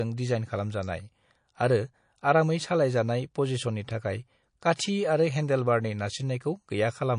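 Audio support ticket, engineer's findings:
Watery, swirly speech throughout, with sibilants chirping metallically. Likely MP3 compression. Weak frequency lines dropping in and out between frames, with damage plainly audible, consistent with a low bitrate around 40 kbps.

Pre-echo at 4.76–4.79 s: a brief hiss of about 29 ms before a sharp attack, about 22 dB above the surrounding floor, and the attack is smeared. Codec noise is spread across a long block of roughly 52 ms, which points to the encoder not switching to short blocks.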